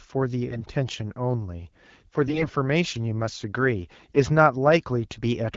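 At 0.48 to 0.64 s, 2.26 to 2.48 s and 3.95 to 4.18 s, the speech turns hoarse and gargly. These are AMR bit errors. Flipped low-priority bits misplace the excitation pulses and skew pitch, gain and spectrum. The middle burst is the most heavily corrupted.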